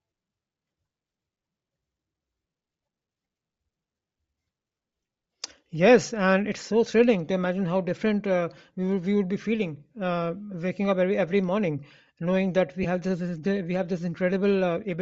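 From the start of the speech to its end the upper spectrum sounds thin and grainy, with a breathy, hissing edge on sibilants and vowels where noise has been substituted for real high-frequency detail. This is likely Bluetooth LC3 compression, with the character pointing to a rate near 32 kbps and short 7.5 ms frames. Unlike a simple low-pass or band limit, the top end isn't silent: it's filled with noise-like texture, which marks a transform codec rationing its bits.

At 12.83 to 12.86 s there are lost LE Audio frames, about 15 ms in all, consistent with two 7.5 ms frames going missing. The decoder covers the hole by repeating the last spectrum with scrambled phase, so instead of a click or a gap of silence there is a brief noisy smear where the speech loses its clear pitch and shape. A plain dropout would leave a hard cut. Here the sound blurs rather than stops, and the loss is too short for the concealment to fade away.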